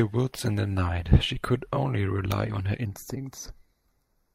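Channel delay (comb filtering) in this speech clip from 2.85 s to 4.34 s: one channel lags the other by a fraction of a millisecond, so summing cuts fixed notches from around 3 kHz, leaving a hollow sound.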